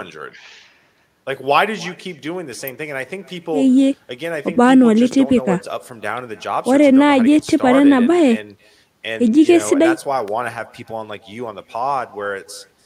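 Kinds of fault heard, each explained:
Echo with no canceller: The far end is playing the call through a loudspeaker, its microphone picks that playback up, and nothing at either end subtracts it, so the sound returns after travelling the network both ways. Here every stretch of speech is trailed by a faint copy, about 24 dB below the original and roughly a third of a second late, heard as a thin shadow running through the whole clip.
Electrical switching spike: Two sharp, very brief snaps sit on top of the speech, one at 2.68 s and another at 10.28 s, each lasting only a few milliseconds and standing apart from the surrounding sound rather than blending with it. Their abruptness and brevity point to a likely cause of a nearby switch, motor or static discharge arcing, with the audio line picking up that burst of electrical interference.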